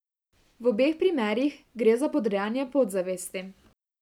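No faults are audible anywhere in the recording.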